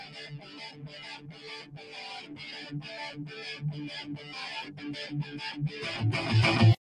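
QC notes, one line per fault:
Throughout: noise suppressor applied to music or sounds. A speech-tuned suppressor treats sustained content as noise, so level swings by roughly 10 dB and the sound pumps.
0.34–0.89 s, 1.18–1.45 s, 1.63–1.93 s: sound cut by the noise suppressor. Steady passages read as noise and get pulled down by about 8 to 9 dB, so they sink and thin.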